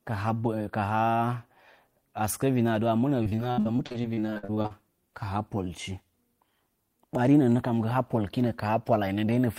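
From 3.23 to 4.72 s there's repeated packet loss (robotic sound): constant dropouts, up to 64 ms each, patched by stretching prior audio, leaving the speech choppy.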